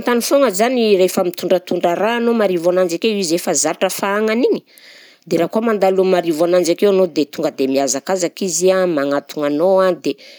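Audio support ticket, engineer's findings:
Listened through the whole speech recording and nothing stood out, so there are no findings to log on this one.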